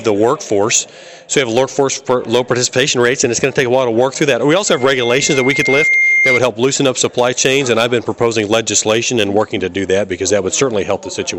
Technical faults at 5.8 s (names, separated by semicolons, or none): loudspeaker feedback squeal